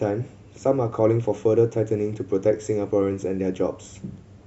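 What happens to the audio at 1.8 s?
Nothing goes wrong at 1.8 s; the speech there plays through intact, with no dropout, click or distortion.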